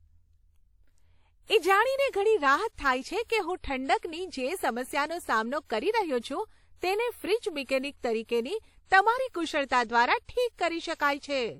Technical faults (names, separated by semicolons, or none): WMA compression